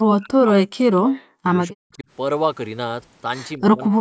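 From 0.07 to 1.49 s, 1.69 to 2.06 s, and 3.58 s to the end, the speech is chopped down by up to about 40 dB, likely speech suppressed in double talk by an echo canceller. The waveform shows sudden near-flat gaps, and the spectrogram shows blank vertical bands.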